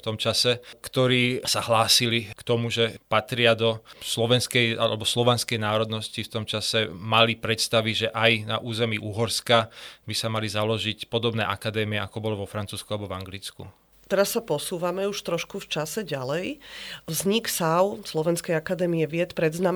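No technical faults can be heard anywhere in the recording.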